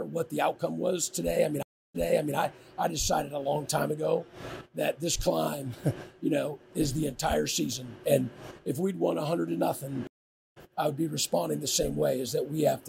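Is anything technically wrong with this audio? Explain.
Yes, there are two stream reconnects. At 1.63 to 2.36 s the audio drops out for 317 ms, then fades back in 418 ms earlier, repeating material. At 10.07 to 10.56 s a 490 ms gap resumes about 0.3 s later, skipping audio. Each time the connection broke and a fresh decoder restarted mid-stream.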